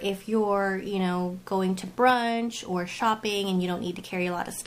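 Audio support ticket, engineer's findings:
Nothing stood out on listening; no issue found to attribute to any component.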